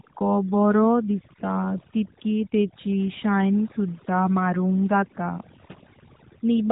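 A short speech recording that's been through two rounds of damage, both running the whole way. First, there's overdone noise removal. The reduction was pushed so hard that the background drops away, apart from little twinkling specks where isolated frequency bands flicker back in. Softer parts of the voice fell below the noise estimate and were clipped away with the noise. On top of that sits the AMR narrowband mobile codec, the old 2G/3G phone speech coder. Nothing gets through above about 3.8 kHz, so the sound has that boxed-in telephone quality. The coding damage is plainly audible: the voice has a buzzy, synthetic edge from the codec rebuilding it from a vocal-tract model and a few pulses per subframe. That level of artefact points to one of the mid-range modes, around 10 kbps.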